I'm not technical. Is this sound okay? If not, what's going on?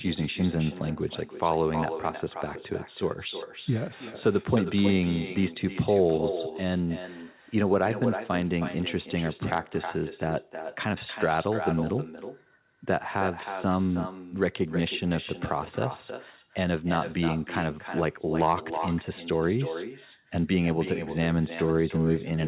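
No. Throughout the speech there's an echo with no canceller: the other end's loudspeaker feeds its microphone, returning a quieter copy roughly a third of a second later.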